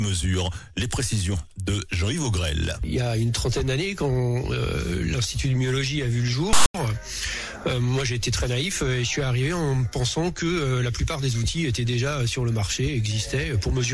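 At 6.53 to 6.74 s the audio is interrupted by file tags played as audio: a block of text metadata decoded as samples, giving a harsh, lopsided rasp with abrupt edges, followed by a stretch of dead silence where the tag's zero padding is read out.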